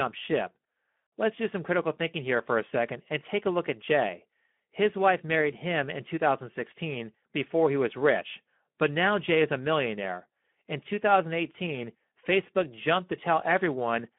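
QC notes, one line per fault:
Throughout, Speex codec: the speech sounds hoarse and noisy, with a grainy edge. That roughness points to a low-to-middle setting, around 11 kbps, where the CELP excitation is starved of bits. The sound sits in a telephone-style band of about 150 Hz to 3.5 kHz, with nothing above 3.8 kHz. Simple band-limiting would leave the voice clean, only dull, so the grain marks this as codec damage, not filtering alone.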